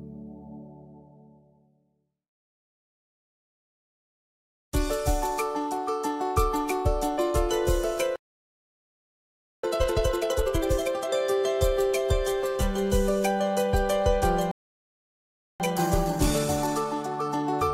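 Playback stall from 8.16 to 9.64 s: the sound cuts out mid-flow for about 1.5 s, likely because the player ran short of data or its thread was blocked. Time-compressed catch-up follows from 9.64 to 11.10 s, with the backlog squeezed to double speed by trimming and cross-fading small slices, so the audio rushes at unchanged pitch. A second playback stall from 14.51 to 15.60 s silences the output for about 1.1 s, likely from the same starvation or blocking. Time-compressed catch-up then runs from 15.60 s to the end at a gentler 1.15 times speed, still at normal pitch, sounding slightly hurried.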